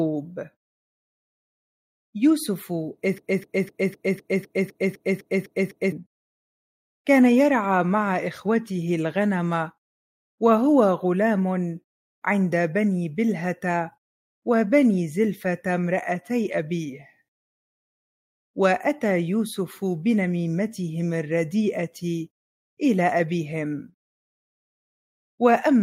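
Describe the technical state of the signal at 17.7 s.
At 17.7 s the signal is intact, with no dropout, clipping, glitch or other fault audible at that point.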